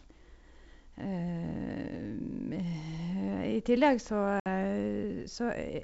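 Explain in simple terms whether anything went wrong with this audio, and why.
Packet loss on an ADPCM call: a few packets carrying this speech never arrived, so about 60 ms of sound was replaced by silence, heard as an abrupt gap from 4.40 to 4.47 s. The receiving end predicts each new sample from the last ones, so after the gap it is briefly out of step with the sender, and the speech comes back with some roughness until it catches up.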